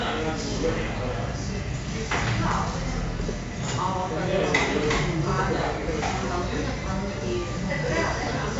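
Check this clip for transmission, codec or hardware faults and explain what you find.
One codec fault runs through the whole clip: 4-bit ADPCM compression, heavily applied. Each sample is coded as a coarse 4-bit step from a predicted value, and the adaptive step lags behind sudden changes. The result is a gritty hiss that rises and falls with the sound's loudness, roughening sharp attacks. Nothing is present above about 7.7 kHz, and the rate fits a 64 kbps stream. Unlike a steady noise floor, the grit falls with the level of the sound. Unlike perceptual codecs, there is no warbling or swirling.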